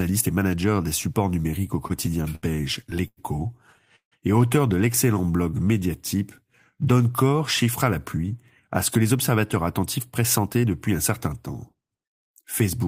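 It's a speech clip with three jitter-buffer problems. Right after "des supports numériques au", from 1.87 to 4.14 s, you get repeated stalls (stutter): nine gaps where the buffer ran dry and the last sound was stretched to fill them, about 389 ms in all, the longest 155 ms, with nothing lost before "et auteur de". Then a jitter buffer slow-down follows "et auteur de" from 5.14 to 6.18 s, with pitch periods repeated to rebuild the reserve, so it plays at 89% speed and adds 121 ms. Finally, after "donne corps chiffre à", from 8.17 to 12.77 s, a jitter buffer speed-up trims bits of pitch periods to shed excess delay. That runs it at 105% speed and cuts roughly a third of a second, so it sounds a little hurried.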